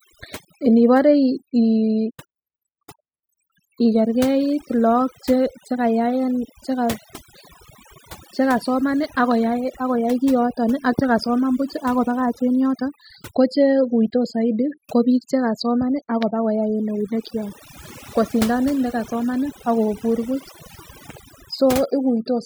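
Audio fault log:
Throughout, overdone noise removal: a noise reduction stage was pushed far too hard, so any frequency band hovering near its noise estimate gets pulled right down or switched off, and the softer parts of the speech are cut along with the noise. Between phrases the background drops to near silence dotted with twinkling specks. On a spectrogram the floor shows as dark emptiness with scattered isolated blips, and speech harmonics look ragged and holed.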